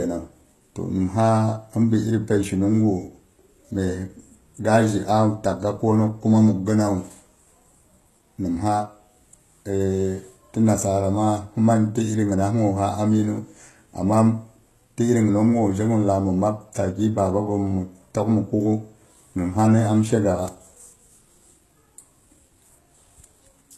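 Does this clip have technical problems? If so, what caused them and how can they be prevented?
Yes. Throughout, the speech has gritty, lispy s sounds and nothing above 12.3 kHz. This likely comes from heavy HE-AAC compression at a very low bitrate, with replicated treble. Encoding at a higher bitrate with plain AAC prevents it.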